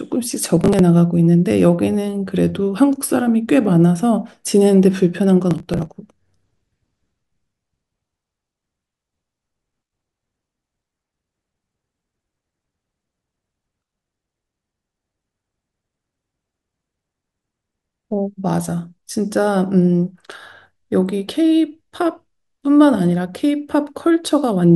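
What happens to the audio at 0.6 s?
Processor overload crackle runs from 0.57 to 0.80 s. The processor keeps missing its buffer deadlines, and each late buffer is skipped, leaving a short hard-edged gap. Over a dozen gaps fall close together, spaced in a way that fits buffers of about 5 ms, so the speech tears into a gritty crackle that stops when the load passes.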